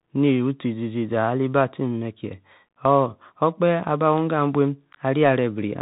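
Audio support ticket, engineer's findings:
Bluetooth CVSD headset codec, whole clip: speech band-limited, nothing above 4 kHz, grainy hiss, scratchy sibilants. One-bit delta coding with adaptive step, consistent with a 64 kbps link.

Unconcealed Bluetooth headset packet loss at 2.69 s: abrupt 19 ms dropout, a handful of lost voice packets filled with silence or an idle pattern instead of being masked.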